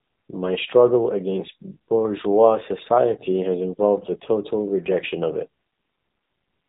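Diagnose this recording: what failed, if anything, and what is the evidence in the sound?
The failure is at the codec stage: the whole recording has passed through an AMR narrowband mobile codec. Nothing above 3.8 kHz survives, and the speech has a plainly audible buzzy, synthetic edge, consistent with a low AMR-NB mode such as 7.4 kbps, where vocal-tract modelling replaces the waveform.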